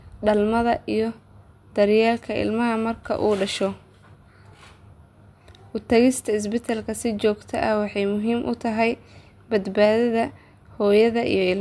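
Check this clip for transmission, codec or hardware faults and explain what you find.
No fault can be heard anywhere in this speech recording. There is nothing to report at any point, so no times or values apply.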